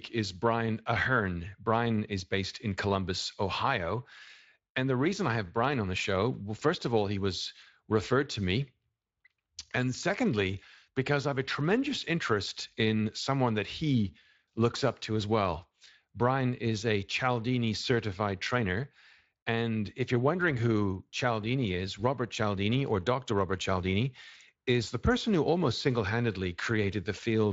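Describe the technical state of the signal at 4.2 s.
At 4.2 s the speech is intact, with the Speex coding working normally and adding only the light coloration expected of it.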